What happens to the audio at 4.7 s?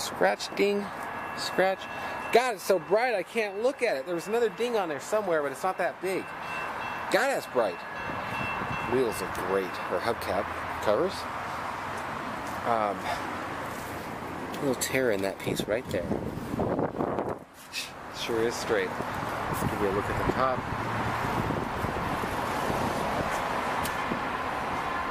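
At 4.7 s the audio plays straight through without any dropout, click, distortion or other fault.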